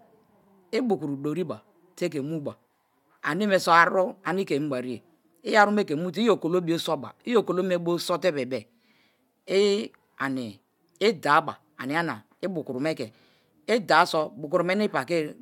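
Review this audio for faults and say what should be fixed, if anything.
Nothing in this speech recording needs fixing. No faults turn up anywhere in it, so no changes are called for.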